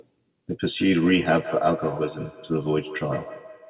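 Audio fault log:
0.74–3.69 s, feedback echo between two devices: sound returns at a fixed interval of roughly 150 ms, about 15 dB below the speech and thinner with each pass, unlike smooth room reverberation.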